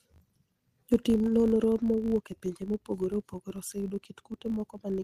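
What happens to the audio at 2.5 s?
At 2.5 s the speech carries a steady 50 Hz buzz that rises and falls with its level, present throughout the clip. This is a filter restarted on every block: it starts each block of roughly 20 ms from silence, so every block opens with a small transient.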